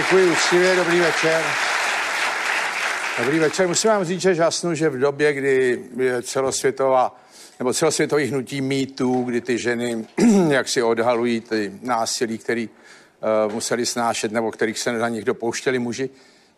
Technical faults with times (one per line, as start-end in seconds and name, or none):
none